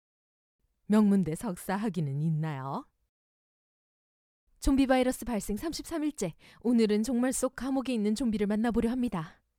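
Sample clock jitter runs through the whole clip. The converter's clock timing wanders by something on the order of a couple of microseconds, so each sample is captured slightly off its intended instant. The resulting error follows how steeply the waveform is changing and sits about 35 dB below the signal. It comes across as a grainy hiss riding on the audio, strongest on loud and bright passages and gone whenever the sound drops to silence.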